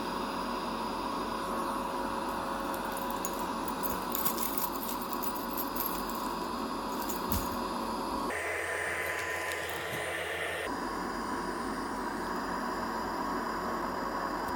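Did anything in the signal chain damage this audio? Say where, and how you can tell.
Yes. Between 8.3 and 10.67 s there is a section at the wrong speed, most likely from an editing or playback stage resampling that stretch against the wrong clock rate. The audio runs about 1.85 times too fast there, so everything in it sounds hurried and shifted up by roughly ten semitones, close to an octave. The tell is that pitch and tempo jump together at the start of the section and drop back together at its end.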